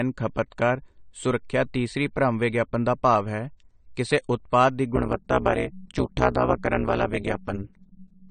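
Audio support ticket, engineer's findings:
Dull, smeared top end throughout, nothing above 9 kHz. Likely AAC compression (AAC-LC), consistent with roughly 32 kbps. Damage plainly audible. Differs from a plain low-pass filter: the quantisation against a hearing model smears texture within the band, not just its ceiling.

Metallic buzz from 4.96 s to end (8.30 s). Overlap-add ripple: frames recombined with a window overlap not summing to constant gain, so level dips about 60 dB once per frame, around 200 Hz. Fast enough to buzz with sideband tones rather than flutter like tremolo.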